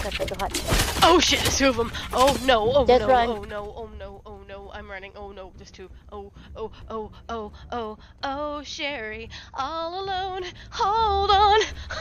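From 10.42 s to 11.34 s there is zipper noise. A level change of roughly 10 dB is applied in coarse steps rather than as a continuous ramp, at around 30 steps a second, with no smoothing between them. Each jump in gain puts a small discontinuity into the waveform, so while the level moves a rapid ticking, zipping texture rides on top of the sound.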